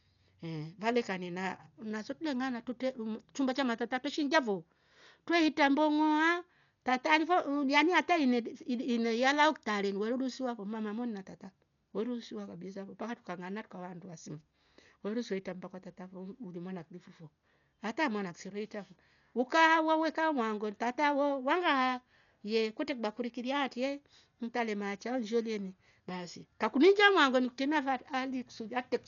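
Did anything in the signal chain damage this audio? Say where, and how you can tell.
Yes. Heavy codec damage runs through the whole speech clip, likely Dolby Digital compression. Nothing is present above 7 kHz, and rough, fluttering noise surrounds tonal parts. This points to a low bitrate near 48 kbps: the encoder narrowed the band and left many frequency lines with no mantissa bits, so the decoder filled them with noise.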